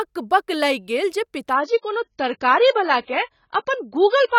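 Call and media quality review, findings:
Adaptive stream at a lower bitrate, 1.54 s to end: abrupt, gapless drop in quality, dull with swirly codec artefacts. Spectrogram shows content above 7 kHz cut off cleanly. Points to the player switching to a much lower-bitrate rendition, around 16 kbit/s.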